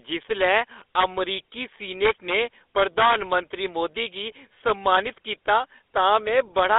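GSM full-rate codec damage runs through the whole speech recording. The band is confined to roughly 300 Hz to 3.6 kHz, and the voice carries a plainly audible buzzy, gravelly roughness. That texture comes from the codec rebuilding speech from a vocal-tract filter excited by a sparse, regularly spaced pulse train rather than the real waveform, which fits a 13 kbps GSM full-rate stream. GSM bit errors strike at 4.56 s as a brief squawk or pop. Corrupted bits reaching the decoder scramble the filter, pitch or gain parameters, so for an instant the spectrum bends or the level jumps. The burst is short enough to point to only a couple of damaged frames before decoding recovers.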